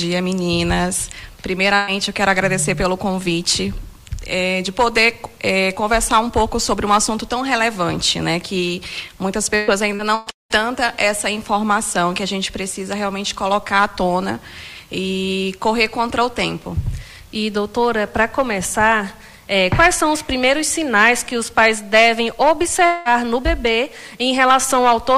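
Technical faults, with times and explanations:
1.75–1.90 s, burst of packet loss: a short run of packets never arrived in time, so the receiver stretched the last sound over the hole for about 120 ms, fading it as a held buzz or hiss. The sound then resumes with that stretch missing.
9.55–10.53 s, repeated packet loss (robotic sound): packets went missing four separate times in under a second, the longest hole 198 ms, and each was patched by extending the preceding sound. With nearly half the span filled in, the result is choppy, with pieces missing.
22.86–23.08 s, long network dropout: the sound freezes into a fading extension for about 200 ms, never reaching silence, then jumps ahead with that portion gone. The likely cause is a brief interruption in the incoming stream, with the receiver concealing the gap.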